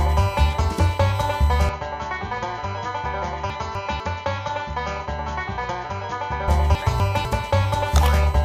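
A steady USB whine at 1 kHz, about 20 dB below the signal, runs throughout and shows as an unbroken horizontal line on a spectrogram. From 1.69 s to 6.48 s the sound turns duller and about 10 dB quieter, with no gap at the switch, most likely because the input switched to a poorer device. The spectrogram is empty above 7 kHz, the waveform shrinks, and a faint new noise floor appears roughly 50 dB down. Chunks out of order jumble the audio at 3.5 to 4.0 s and 6.75 to 7.25 s, where a 250 ms block arrives one chunk late and swaps places with its neighbour. The waveform shows hard discontinuities at each join.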